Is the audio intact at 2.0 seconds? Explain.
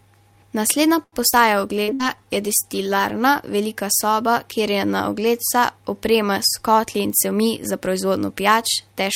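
No. A burst of packet loss from 1.94 to 2.02 s dropped about 60 ms of audio; the receiver filled the gap by extending the last sound and fading it, so it becomes a held buzz or fading hiss before resuming further on. This follows a similar burst at 1.82 to 1.91 s.

A jitter buffer slow-down, running from 1.58 to 2.26 s, repeated short stretches to rebuild reserve, adding about 51 ms. Speech plays at 93% speed with unchanged pitch, sounding drawn out.

A call bitrate drop from 64 to 22 kbps, lasting from 1.55 to 3.35 s, forced coarser encoding, leaving the speech rougher and more muffled at this point.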